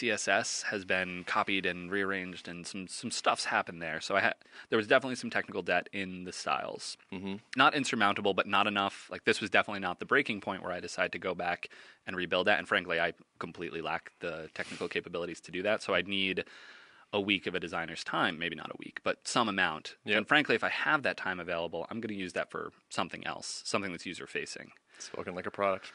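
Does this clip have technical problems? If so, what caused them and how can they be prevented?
No, nothing in this speech clip stood out as a technical problem on listening, and the faint room noise sits about 50 dB below the speech.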